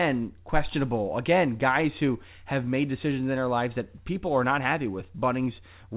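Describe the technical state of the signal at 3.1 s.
At 3.1 s the speech is intact, with no fault present there, only the ordinary narrowband sound of the WebRTC call path, which carries nothing above 4 kHz.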